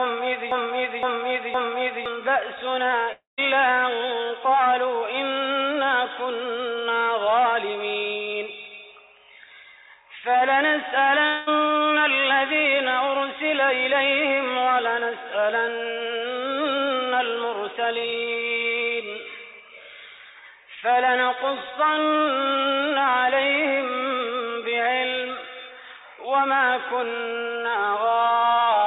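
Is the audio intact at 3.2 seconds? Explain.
No. Audio stopped arriving from 3.12 to 3.40 s, likely a long network dropout. The last sound stretches into a fading buzz, then silence, and 260 ms is lost.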